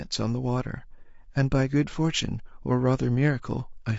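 From start to finish the speech sounds rough and grainy, with a hiss filling the gaps between harmonics and a dulled, artificial top end. This is likely low-delay AAC compression: short AAC-ELD frames at around 32 kbps resolve pitch harmonics poorly.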